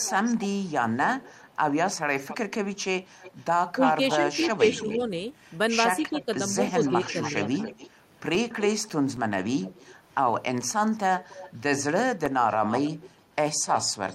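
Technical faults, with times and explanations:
0.00–5.03 s and 6.05 s to the end, echo leak: a copy of the speech returns about 280 ms late, roughly 15 dB down, likely from a loudspeaker whose echo canceller let it through.
3.78–5.09 s and 6.02–7.47 s, speech suppressed in double talk: the talker briefly dips by up to about 10 dB, then about 5 dB, likely an echo canceller ducking overlapping speech.
8.35–9.44 s and 12.26–13.34 s, CD scratch ticks: five ticks in each stretch, roughly four a second and a few milliseconds long, from a scratch the player patches once per disc turn.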